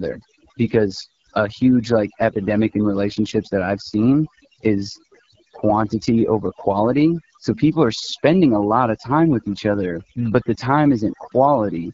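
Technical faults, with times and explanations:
Throughout, overdone noise removal: bands near the noise estimate are cut away, leaving near-silent gaps with twinkling specks.
Throughout, AMR wideband (HD Voice) codec: plainly rough, raspy speech, consistent with AMR-WB near 8.85 kbit/s, one of its lowest rates; energy above 6.4 kHz is synthetic shaped noise.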